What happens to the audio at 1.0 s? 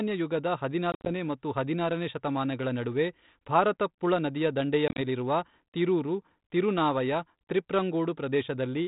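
Packet loss on an ADPCM call hits between 0.92 and 1.11 s: about ten packets drop out, removing 110 ms of audio scattered across roughly 140 ms, with the longest gap 60 ms. The gaps are filled with silence, so the sound breaks into hard-edged holes. Because ADPCM sends only differences from a prediction, the receiving decoder's predictor and step size drift out of step with the sender's on this 32 kbit/s G.726 link. The speech resuming with "ಮತ್ತು ಹದಿನಾರನೇ ಶತಮಾನಗಳ ನಡುವೆ" therefore comes back slightly distorted until the decoder settles.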